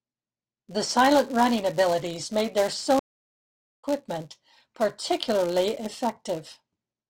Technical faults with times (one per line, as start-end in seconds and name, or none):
0.00-7.10 filter restarted on every block
2.99-3.84 stream reconnect